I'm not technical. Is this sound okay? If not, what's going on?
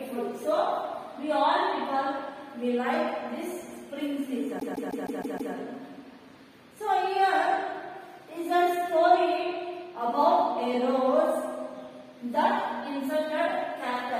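No. From 4.59 to 5.53 s there are repeated frames: a 157 ms stretch of sound replays six times, causing a stutter and adding about 0.94 s.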